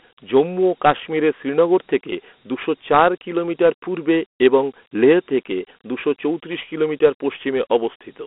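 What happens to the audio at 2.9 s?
Dialogic VOX ADPCM coding is present at 2.9 s, as it is across the whole clip. Each sample is stored as a 4-bit step from a running prediction, and the 32 kbps rate fits 8,000 samples a second, so the speech sits in a telephone-style band of about 250 Hz to 3.4 kHz with nothing above 3.8 kHz. The coarse steps leave a plainly audible gritty hiss that rides along with the speech.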